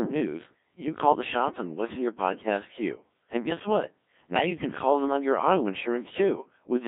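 Right from the start the whole thing has that Codec 2 vocoder sound: robotic, buzzy speech squeezed into a band of roughly 200 Hz to 3.6 kHz, and the damage is heavy. The decoder isn't keeping the waveform at all. It rebuilds the voice from sine waves using only pitch, voicing, energy and a spectral envelope, and the coarseness fits a rate around 1.3 kbit/s. That's why everything sounds synthetic and robotic.

Then, from 4.30 to 4.50 s, right after "guess what" and just before "can call them on", you get bit errors on digital voice radio. For about 0.2 s the voice lurches in pitch and level and the tone colour flips around, breaking into warbly, bleepy gibberish. Flipped bits, on the order of 7 percent of them, are scrambling the frame parameters, and the length of the burst points to about five vocoder frames being hit.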